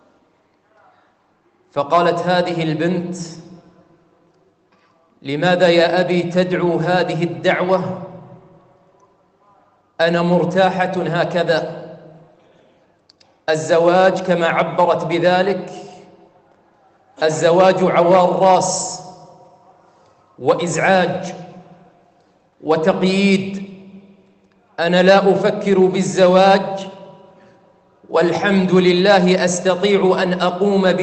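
Nothing stood out on listening; the audio sounds like an ordinary call connection throughout.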